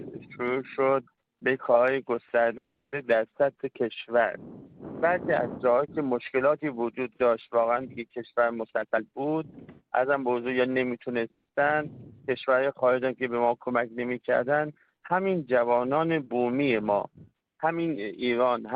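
At 2.57 s the sound stops short: a brief tail of the last sound is carried on, then about 320 ms of silence, and at 2.94 s the audio resumes where it left off. This is a call audio freeze. Packets were likely held up in transit, the jitter buffer ran dry, and the receiver filled the wait with a fading continuation. The result is 350 ms of added gap with nothing lost, and the delay grows by that much.

From 8.68 s to 10.61 s the audio rushes along at about 118% of normal speed without any rise in pitch. This is a jitter buffer speed-up. Too much audio had built up in the buffer, so the receiver kept cutting out pitch-period-sized slices, roughly 0.4 s in total, to bring the delay back down.

A second, shorter freeze runs from 11.31 s to 11.47 s. Here the stretched continuation of the last sound lasts longer and is followed by only about 50 ms of silence, inserting 140 ms in all. A second speed-up from 18.04 s to 18.73 s hurries the sound at about 111%, trimming roughly 0.1 s.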